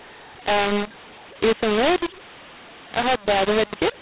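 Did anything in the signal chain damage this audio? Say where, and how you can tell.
Yes. The speech is harsh and gritty from start to finish, with levels that come out scrambled, some too loud and others too quiet, and the pauses are filled with a steady hiss instead of dropping to silence. The fault is a mu-law and A-law mix-up at the decoding stage. The telephone audio was encoded as 8 kHz G.711 A-law, which fits the band limit below 4 kHz, but it was decoded with the mu-law table. That mismatch misplaces every sample on the logarithmic scale and lifts the quietest ones well above zero.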